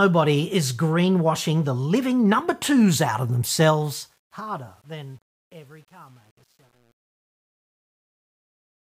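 From 3.63 s the speech grows gritty as it fades out, and from about 4.43 s to the end at 8.81 s the tail is at its roughest. This is truncation distortion on a fade: the volume stage keeps too few bits and adds no dither, which fits a 9-bit stage. As the level sinks toward the smallest step, the waveform collapses into coarse square steps, and this roughens a fade-out that begins around 3.6 s.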